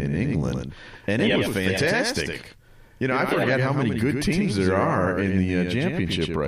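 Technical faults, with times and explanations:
Throughout: doubled audio track. Every syllable of the speech is heard twice, with a second copy trailing about a tenth of a second behind the first. The copy sits roughly 5 dB below the original and covers the full frequency range. It has no decay and no room colour, so it sounds like a hard slapback rather than an echo. The likely cause is the same signal reaching the mix twice, once through a slower path.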